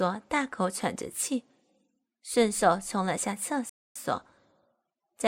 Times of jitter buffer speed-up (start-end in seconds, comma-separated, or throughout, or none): none